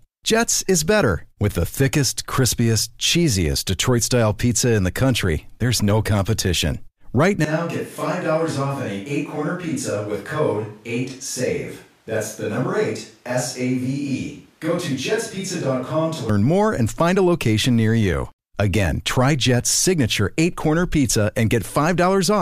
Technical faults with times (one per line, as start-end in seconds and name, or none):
7.44-16.29 switch to a distant microphone